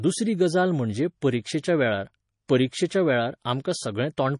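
Throughout the clip, a starved encoder, likely MP3 compression at a low bitrate around 32 kbps, has cut everything above 10.6 kHz and dropped weak frequency content frame by frame, leaving the speech dull, watery and swirling, with chirpy, smeared sibilants.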